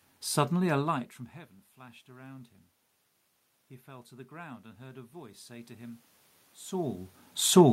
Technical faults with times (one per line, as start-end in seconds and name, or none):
3.86-6.06 automatic gain rising